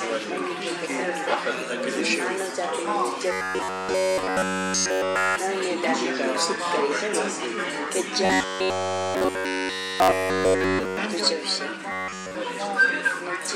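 Robotic sound from repeated short buffers hits at 3.32–5.36, 8.25–10.97 and 11.92–12.35 s, a rigid 93.8 Hz buzz, likely from a roughly 10.7 ms chunk looping.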